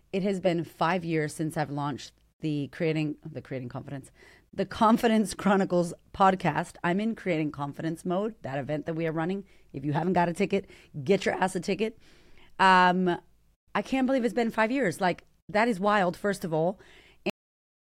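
At 17.30 s, just after "wild first of all", the speech hits a cut-off end: the last buffers were never written, so sound stops mid-utterance into digital silence. Unlike a fade-out there's no decay, and unlike a dropout nothing resumes.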